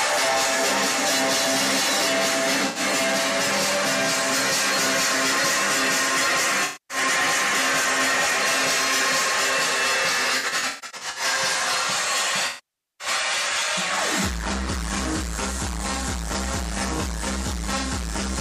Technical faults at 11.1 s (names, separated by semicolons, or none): AAC frame loss with concealment